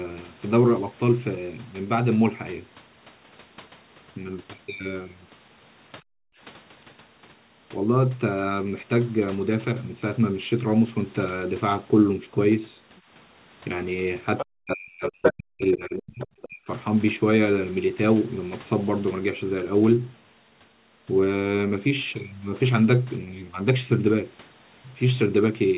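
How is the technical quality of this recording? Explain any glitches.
The speech is band-limited, with nothing above 4 kHz, which fits a narrowband G.711 A-law call path. The clip has two kinds of glitch.

Speech suppressed in double talk occurs at 6.31–6.36 s and again across 14.48–16.69 s. The speech is pulled down by roughly 40 dB, clipping a brief fragment first and then affecting about two seconds of speech. This is likely an echo canceller clamping the near talker because it could not separate them from loudspeaker echo.

The other side's voice leaking through appears at 12.97–13.01, 14.38–14.46, 15.04–15.33, 15.72–15.76 and 16.21–16.25 s. These are a second voice in short scraps, ranging from about 35 dB down to roughly level with the main speech at 15.04 s. The likely cause is loudspeaker playback that the echo canceller did not fully remove from the microphone.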